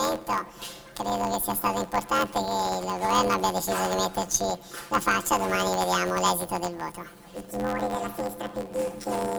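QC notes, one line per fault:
Throughout: planar audio read as interleaved; each 11.61 ms block, consistent with 512 samples, replays at double speed, giving a robotic 86 Hz buzz without clear octave shift.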